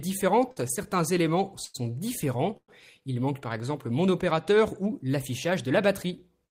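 Short stalls from late packets occur at 0.51 s and 1.64 s. Each time a packet arrived after it was due, so the jitter buffer ran dry and the receiver held the last sound instead of cutting out, for about 50 ms and then about 97 ms. Playback then resumed from the same point, so no audio is lost, but each stall shifts everything after it later. The stretched sound carries a faint buzz or dip. A call audio freeze follows at 2.57 s, lasting until 2.70 s. The sound is extended into a fading buzz for roughly the first 40 ms, then drops to silence for about 70 ms before the audio picks up exactly where it stopped. This is likely due to packets held up in transit long enough to empty the buffer. The 111 ms gap inserted here adds to the earlier delay rather than removing anything.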